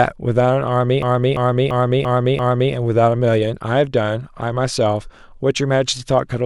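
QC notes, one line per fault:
1.02–2.73 s, system hang loop: the system or audio driver stalled while the sound hardware kept replaying the same ring buffer, which fits a 16384-sample buffer at 48 kHz. One 341 ms piece of speech repeats exactly five times, a stutter at about 2.93 per second. Because each repeat is identical, the sound hammers on the same fragment before normal playback resumes, with essentially no audio skipped afterwards.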